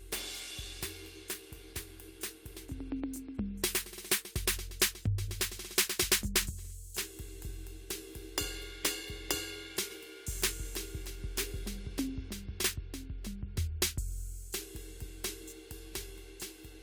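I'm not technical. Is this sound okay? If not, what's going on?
Yes, nothing stood out as a problem when listening to this music.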